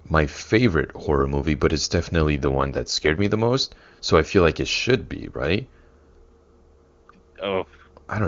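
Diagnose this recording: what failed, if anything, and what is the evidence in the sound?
An AMR rate drop, a network-driven codec fault, runs from 2.31 to 3.30 s. The speech turns rougher and more synthetic there, then clears once the rate recovers. The sound points to the link pushing the AMR-WB encoder from 23.85 down to 8.85 kbit/s, trading speech bits for error protection. Unlike packet loss or concealment, there is no gap or dropout, and the audio band stays just as wide; only the texture degrades.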